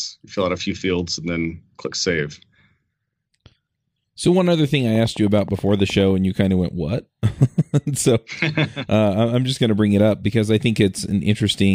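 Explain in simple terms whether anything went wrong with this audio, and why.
Something did go wrong. From 4.95 to 6.12 s, a steady ticking runs over the speech, about ten sharp clicks at an even pace of roughly nine or ten per second, each as loud as the talking itself. This is a train of clicks: a repeated pulse gets added to the recording for about a second. The likely cause is electrical interference from nearby equipment, or a faulty connection or power supply.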